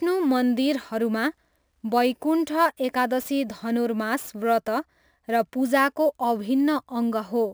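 A speech recording with a crude rate conversion running through the whole clip. A gritty, inharmonic fizz rides on the speech. It is loudest on strong and bright sounds. The error sits roughly 25 dB below the speech. Samples seem to have been repeated to raise the rate, with no filtering. That fits a step from 32 kHz to 44.1 kHz, a ratio of about 1.38. The repeat pattern creates shifted, inharmonic copies of the speech.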